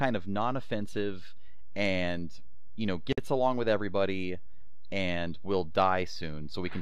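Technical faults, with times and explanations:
Throughout: DC offset. The speech waveform sits shifted off zero by a constant, inaudible itself but eating headroom and showing as steady energy at the spectrum's bottom.
3.13–3.18 s: gap at a join of encoded pieces. A 52 ms gap opens after "you know", with smeared edges; separately encoded pieces kept their start delay and end padding, and speech resumes with "along with everybody and".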